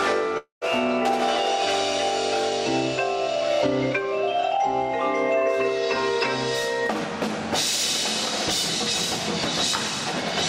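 From 0.37 s to 0.64 s the audio breaks off: the last sound is stretched into a fading buzz, then dies to silence for about 0.11 s before resuming with roughly 240 ms lost. This is likely a long network dropout, with receiver concealment bridging the gap.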